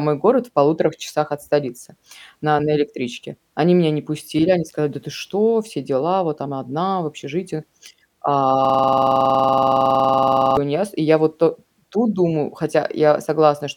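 A speech recording with a system hang loop from 8.65 to 10.57 s. The system froze while the sound hardware kept replaying one 46 ms buffer, which fits a 2048-sample buffer. This produces a rapid 21.5 Hz repetition, 41 times over, until the audio resumes on "иняз и я вот".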